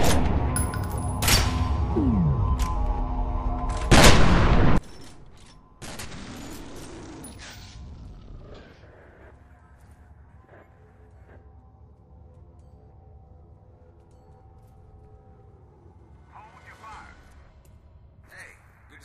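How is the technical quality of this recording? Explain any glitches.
The recording has one serious fault. From 4.78 s to the end, the sound abruptly drops by about 25 dB, leaving only a faint copy. The likely cause is one channel inverted: with one stereo side's polarity reversed, the shared content cancels when the channels are mixed to mono. Unlike a dropout, a faint residue remains.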